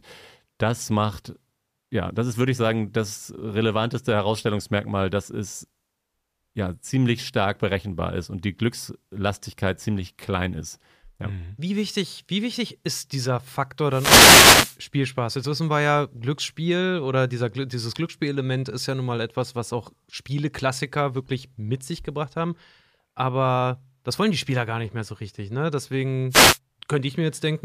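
At 13.89 to 14.78 s and again at 26.30 to 26.59 s, a wireless microphone noise hit occurs: the FM radio link fades as reflected paths cancel, receiver hiss rises over the speech, and each event is heard as a brief swish of static.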